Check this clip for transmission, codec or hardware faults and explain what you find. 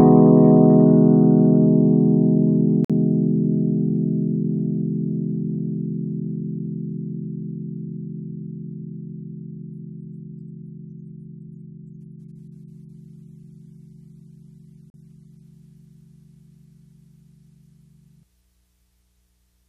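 Two short dropouts come from a gap between stream segments. The timestamps of consecutive stream segments, which fit a segment length of about 6 seconds, fail to butt up exactly, so the player pads the mismatch with silence. The sound cuts out with hard edges from 2.85 to 2.90 s (51 ms) and again from 14.90 to 14.94 s (40 ms), then resumes exactly where it left off. Nothing is dropped; the silence is inserted time.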